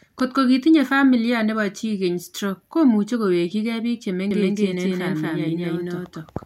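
Speech clip: from 4.31 s to the end, a doubled audio track appears, likely from a second, slower capture path, adding an equally loud, dry full-band copy roughly 200 ms behind that starts abruptly.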